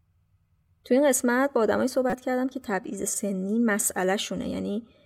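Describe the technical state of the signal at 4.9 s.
At 4.9 s the speech signal is intact, with no audible fault at that moment.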